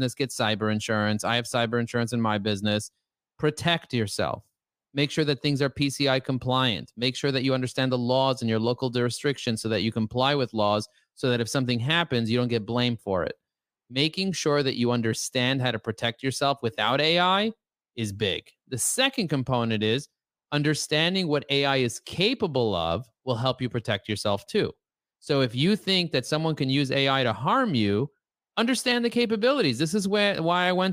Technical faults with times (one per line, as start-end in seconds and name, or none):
none